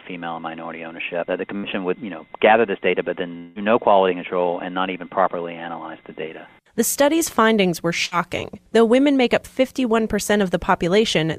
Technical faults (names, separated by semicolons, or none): burst of packet loss; long network dropout